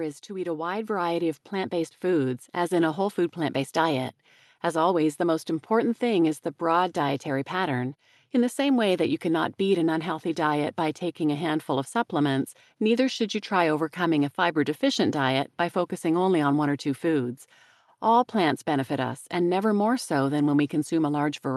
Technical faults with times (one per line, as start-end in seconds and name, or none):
0.27-3.66 automatic gain rising